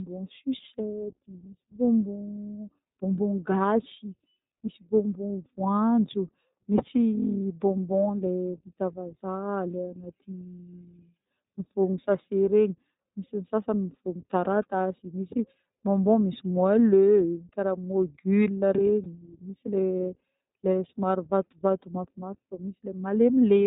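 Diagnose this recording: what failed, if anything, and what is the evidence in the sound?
The codec stage failed: the speech runs through the iLBC codec for its whole length, and the damage is plainly audible. Every part of the recording has the slightly rough, synthetic texture of excitation coded independently in 20 ms frames, which fits iLBC's 15.2 kbps mode. On a spectrogram, energy stops sharply at about 4 kHz with nothing above it. The waveform shows a gritty, simplified fine structure from frame-by-frame reconstruction.

At the network stage, lost iLBC frames cause a brief concealment event from 19.04 to 19.07 s. The gap of about 20 ms points to a single dropped packet, which the decoder filled by repeating the last pitch cycle mixed with noise. It is heard as a short, held, faintly buzzy vowel. The speech is clean again immediately afterwards because iLBC frames decode independently. 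A spectrogram shows a short stretch of steady, smeared harmonics, and the waveform shows a repeated periodic cycle.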